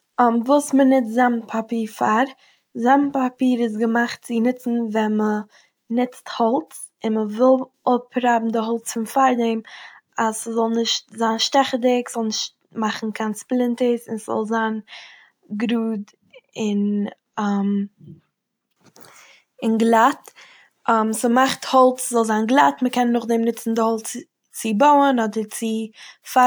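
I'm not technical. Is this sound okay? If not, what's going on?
Yes, this sound is okay; nothing in it is going wrong.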